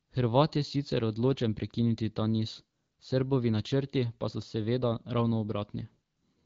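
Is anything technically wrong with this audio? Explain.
No, nothing is technically wrong with this audio.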